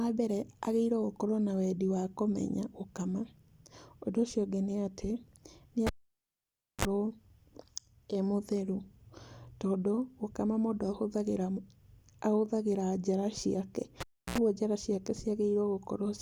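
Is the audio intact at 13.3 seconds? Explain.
Yes, at 13.3 seconds the speech plays through cleanly, with no dropout, click, distortion or other fault at that moment.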